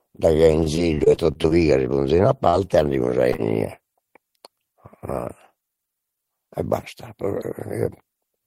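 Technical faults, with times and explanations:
0.63–1.52 s, repeated packet loss (robotic sound): across this stretch, ending just before "si ponzein a", the stream kept dropping packets, nine gaps in all, the longest about 29 ms. The decoder covered each hole by extending the preceding sound, so roughly a fifth of the span is synthesised rather than received. With gaps arriving this close together the concealment never settles, giving a choppy texture with fragments of the speech missing.
3.33–3.40 s, short concealed packet loss: right after "andemus a", two back-to-back losses of about 20 ms each reached the decoder too late or not at all. The receiver bridged them by continuing the last waveform, carrying its pitch where voiced or filling with shaped noise where not, for about 12 ms and then 25 ms before crossfading into the real signal. The result is a brief smear or wobble, and a short consonant there may be lost.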